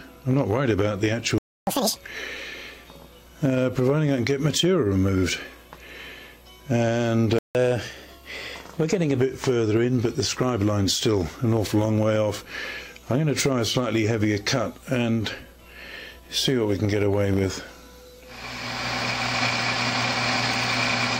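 At 1.38 s the sound stops dead for about 0.29 s. This is a playback stall. The player most likely ran short of data, or its thread was blocked, so the output went silent until it recovered. At 1.67 s the sound resumes with a catch-up at higher speed. The backlog plays at double speed until 1.96 s. Pitch jumps by roughly ten semitones, a chipmunk-like lurch, then snaps back to normal.

A second stall begins at 7.39 s. The sound drops out for about 0.16 s, again likely because the player starved or was held up. At 7.55 s another catch-up starts, gentler this time. Playback runs 1.1 times fast until 9.20 s. Pitch sits about a semitone and a half sharp. The rise comes across as a slightly hurried, brighter stretch before it settles.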